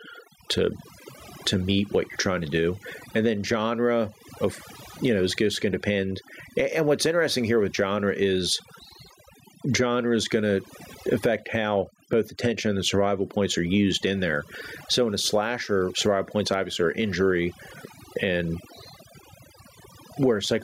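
Right from the start and all the way through, the speech has that overdone noise removal sound. The background has been scrubbed down, but it's peppered with little twinkling, chirpy specks where individual frequency bands keep flicking on and off. The reduction was pushed so hard that the quieter detail in the voice got treated as noise too.

On top of that there's gain pumping, also running the whole length. The level gets yanked back down as soon as the voice comes in loud, swinging by something like 15 dB. Loud and soft syllables sit squashed close together. The likely cause is input gain set far too hot for the mic, with a fast limiter or compressor clamping down on each loud sound.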